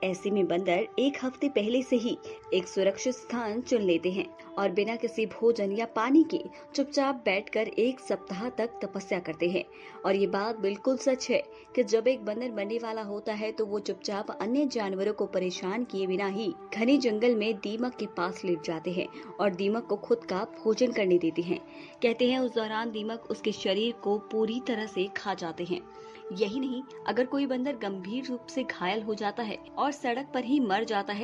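No technical faults can be heard anywhere in this clip.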